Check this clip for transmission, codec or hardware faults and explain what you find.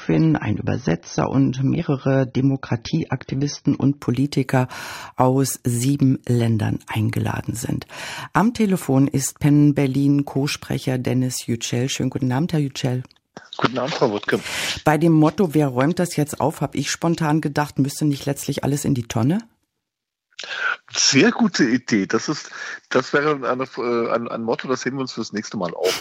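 One transmission fault is present. Adaptive stream starting at a low bitrate, 0 to 4.0 s: the player opened on a lean version to start fast, then switched up after gauging the connection. Nothing sounds above 6.3 kHz until then, consistent with roughly 24 kbit/s AAC, and artefacts are thicker; the sound then brightens abruptly, without a gap, to a quality that suggests about 96 kbit/s.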